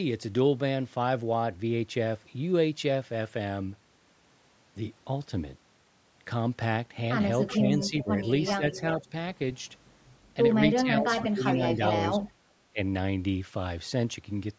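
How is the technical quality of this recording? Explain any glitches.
The recording has two kinds of call-processing glitch in its second half. Both come from a far end on a loudspeaker. The audio ends at about 8 kHz, as the call's microphone path passes nothing higher.

Echo leak appears from 7.46 to 7.89 s, 8.46 to 8.81 s and 11.47 to 12.31 s. A delayed copy of the speech trails the original by 378 ms. It sits about 15, 20 and 10 dB below the speech. The far side's echo canceller likely failed to remove what its microphone picked up from its loudspeaker. That leftover was sent back.

Speech suppressed in double talk occurs from 7.58 to 9.12 s and again from 10.82 to 12.8 s. Both sides talk at once here. The speech dips in pieces, by up to about 10 dB in the first stretch and about 20 dB in the second. The affected moments add up to roughly half a second, then roughly 0.7 s. The echo canceller likely could not tell the talker from the echo, so it turned both down.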